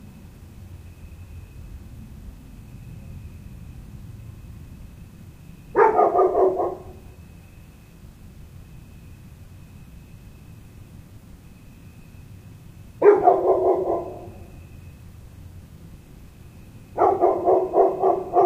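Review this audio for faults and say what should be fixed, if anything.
Nothing here needs fixing, as the sounds in this clip come across without any technical problems that call for attention.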